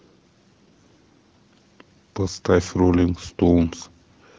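No technical faults occur anywhere in the speech, so there is nothing to place in time order.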